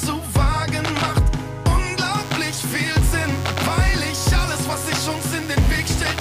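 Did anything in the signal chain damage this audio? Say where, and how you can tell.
Yes. From 2.15 s to the end at about 6.2 s, a thin, steady buzz sits under the sound, roughly 20 dB below it. Its fundamental is 100 Hz, with a dense stack of harmonics. That is DECT cordless phone buzz picked up in the analogue wiring. A nearby DECT handset or base transmits a burst every 10 ms, and an unshielded input or preamp stage rectifies that RF into audio-band pulses at the 100 Hz burst rate.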